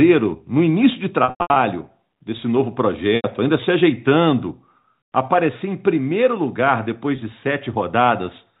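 A held, buzzy smear, with brief drop-outs, interrupts the speech from 1.24 to 1.56 s. A shorter buzz follows at 3.16 to 3.24 s, and a brief catch at 7.16 to 7.18 s. These are packet loss with pitch repetition. The receiver bridged each gap by repeating the last pitch period and fading it out. In the first event, 240 ms went missing across 320 ms, with the longest unbroken gap 100 ms. The other two lost 80 ms and 20 ms. The telephone band of the G.711 coding stays audible throughout.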